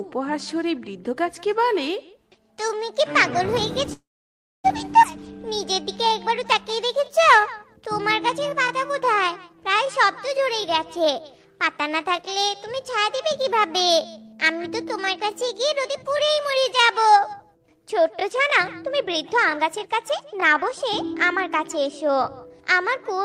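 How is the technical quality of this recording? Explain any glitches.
The recording has several timing glitches from network delivery and jitter-buffer adjustments.

Call audio freeze, 3.93 to 4.66 s. The sound stalls for about 0.7 s. A brief tail of the last sound fades out, then about 0.62 s is silent. The audio resumes exactly where it stopped, with nothing lost. The likely cause is delayed packets draining the jitter buffer. The receiver stretched the final sound and then waited.

Skip ahead, 5.02 to 5.05 s. Playback jumps forward with almost no gap. Roughly 0.4 s of audio is missing. The two sides are spliced nearly directly. A stretch was dropped while later audio was already queued, so the receiver moved straight on to it.

Jitter buffer slow-down, 5.45 to 9.84 s. The audio runs at 95% speed with unchanged pitch. Sounds are drawn out, adding 207 ms in total. The buffer needed reserve, so the receiver repeated single pitch periods and small pieces of pauses many times.

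Jitter buffer speed-up, two passages. From 12.07 to 12.99 s the audio runs at 104% speed, losing roughly 40 ms. From 18.36 s to the end it runs at 110%, losing about half a second and sounding noticeably hurried. Pitch stays the same in both. The buffer held more than its target, so the receiver trimmed short pitch-period pieces repeatedly to cut the delay.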